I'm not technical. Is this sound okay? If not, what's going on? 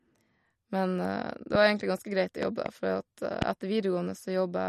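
No. The speech has a watery, swirly quality throughout, and the high treble stops sharply around 13.1 kHz, so s sounds lose their crispness. This is MP3 compression damage. It is likely from saving the file with too few bits.

There are also three loud pop events, all much louder than the speech. A single pop sounds at 1.55 to 1.57 seconds, and another at 3.42 to 3.44 seconds. Between 2.43 and 2.68 seconds come two pops close together. The speech carries on underneath each one. A likely cause is a sudden electrical jolt, such as a plug, switch or static.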